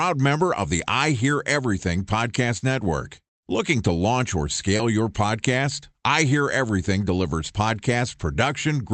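Short concealed packet loss strikes at 2.57–2.63 s, 4.77–4.81 s just after "to launch or", and 5.81–5.84 s. Each time, 20–40 ms of audio arrived too late, so the decoder extended the preceding sound and blended back. The result is brief smears rather than the silent gaps of plain dropouts.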